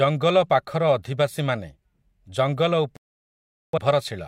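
A speech recording whose sound drops to silence at 2.97 s and stays muted until 3.78 s, a gap of about 0.8 s with nothing recovered. This is a digital broadcast dropout: the receiver lost valid frames and muted until good data returned.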